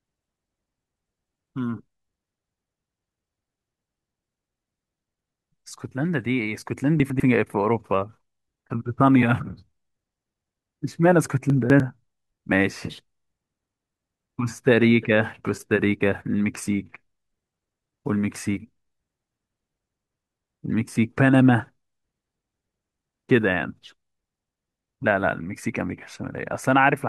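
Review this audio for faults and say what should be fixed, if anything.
Chunks out of order occur in this speech at 3.8 to 4.0 s, 7.0 to 7.2 s and 11.5 to 11.8 s. A 100 ms chunk plays one slot late in the first two and two slots late in the third, leaving a jumbled moment and three hard joins each time. Unlike a dropout or repeat, no audio is missing or doubled, only reordered. To prevent it, sequence-number each chunk and reorder in a jitter buffer before playback or writing.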